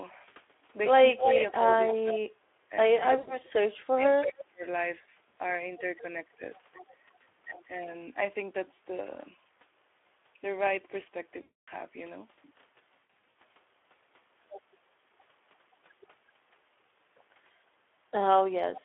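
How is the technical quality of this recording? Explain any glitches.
Pretty rough: it's a heavily squeezed call with echo, a badly ducked stretch near the start, and three dropout patches.

Speex codec, all the way through: the audio sits in a narrow 300 Hz to 3.5 kHz phone band, and the coarse, hoarse, noisy texture fits Speex at around 11 kbps. At that rate the codec is starving the excitation, so the grit is plainly audible.

Echo leak, 1.17 to 1.94 s and briefly 4.39 to 4.43 s: a delayed copy trails the talker by roughly 320 ms. The first one is about as loud as the speech, the second about 20 dB down. It's most likely a far-end loudspeaker bleeding past an incomplete echo canceller.

Speech suppressed in double talk, 1.21 to 1.27 s and 1.9 to 4.65 s: the first is a small dip of about 5 dB. The second is much worse, with the voice ducking or cutting out in pieces, as deep as about 30 dB, over roughly a second and a half. 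The likely cause is an echo canceller that couldn't untangle both sides talking at once.

VoIP packet loss concealed by the speech codec, 3.17 to 3.37 s, 11.41 to 11.69 s and 13.0 to 13.27 s: about 100, 260 and 240 ms went missing. The last was scattered across 360 ms, with no single gap over 100 ms. The decoder stretches the last sound into a buzzy tone or coloured noise that fades, and the voice stays weak for a bit afterwards.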